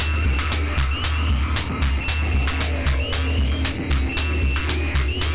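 Nothing stood out on listening to this recording of everyday sound.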